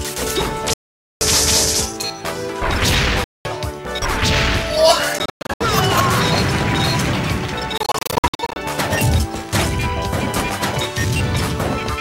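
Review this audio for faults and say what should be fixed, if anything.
The audio cuts to silence four times and resumes further along as if it had kept playing: 0.73 to 1.22 s (about 0.48 s missing), 3.24 to 3.47 s (0.21 s), 5.19 to 5.63 s (broken gaps totalling 0.28 s, longest 0.11 s), and 7.78 to 8.57 s (gaps totalling 0.43 s, longest 56 ms). This is likely a Bluetooth dropout, with late packets discarded before reaching the headphones. Moving the source closer to the headphones and clearing radio interference should prevent it.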